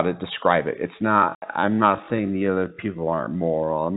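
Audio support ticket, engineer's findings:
Time-stretched section, 1.0 s to end: sound abruptly slows to about 0.61x speed, pitch unchanged; likely a stretch-to-fit process repeating short grains. Spectrogram shows elongated harmonics.

Packet loss filled with silence, 1.35 to 1.42 s: 70 ms hard-edged gap, fitting seven 10 ms packets. Waveform drops to silence; spectrogram shows a clean vertical blank band, all within the 4 kHz G.711 telephone band.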